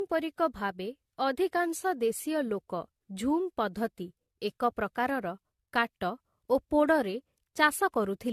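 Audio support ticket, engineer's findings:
Generation loss, whole clip. Speech sounds swirly, smeared and hollow; consonant attacks blur. Nothing above 14.1 kHz. Likely repeated AAC-LC re-encoding, fits 64 kbit/s, around five passes. Each pass requantises on a shifted frame grid, stacking noise and spectral holes.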